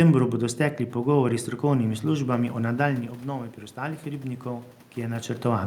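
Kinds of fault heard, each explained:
Automatic gain rising: the input drops about 9 dB at 3.74 s, so the gain creeps up, swelling voice and room noise together to the end.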